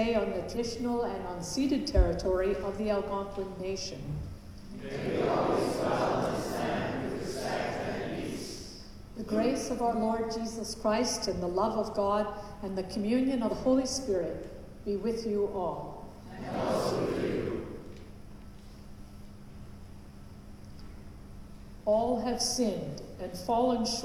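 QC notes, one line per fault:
0.51–0.57, 12.26–12.32, 13.47–13.53 and 16.86–16.92 s: compressed frames skipped. The sound jumps ahead by roughly 150, 50, 100 and 100 ms, steps that fit a frame of about 46 ms.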